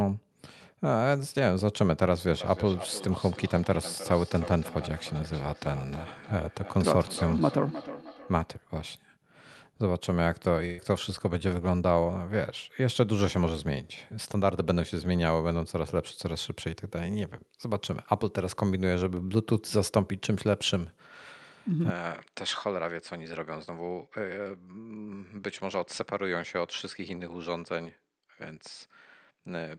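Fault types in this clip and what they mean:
Feedback echo between two devices: From 2.41 to 8.53 s the speech returns in copies spaced roughly a third of a second apart. A second device in the room replays the call, and this microphone captures it again where no echo canceller can remove it. The strongest copy is about 13 dB below the direct speech. On a spectrogram each syllable is shadowed by fainter, thinner duplicates at a regular spacing. On the waveform, small repeated envelopes trail each burst.
Burst of packet loss: Between 10.65 and 10.91 s a run of audio never arrived in time. The receiver filled 128 ms by stretching the last received sound, which becomes a held buzz or hiss that sinks in level before the speech picks up again. About 120 ms of the original is gone. A spectrogram shows a smeared, steady band with fading energy and then an abrupt restart. The waveform shows a repetitive, shrinking stretch with no silent gap.
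Input switched to a poorer device: At 21.9 s the sound turns duller and about 10 dB quieter, with no pause, and stays that way to the end. This is likely a change of input to a lesser microphone or headset profile. Before the switch, content reaches about 12 kHz through the Opus call path. Afterward the spectrogram shows a lower ceiling. A new, faint noise floor appears, roughly 55 dB down, and the waveform steps down in amplitude.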